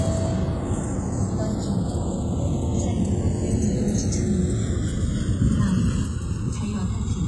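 From the start and all the way through, the two channels are drifting apart. They seem to run on separate clocks, off by roughly 100 ppm, so their offset creeps to under a millisecond by the end, giving a slow flanging sweep. Also throughout, the treble sounds gritty and metallic with nothing above 11.5 kHz, heavy damage that's likely HE-AAC compression rebuilding the top end, consistent with a very low bitrate around 12 kbps.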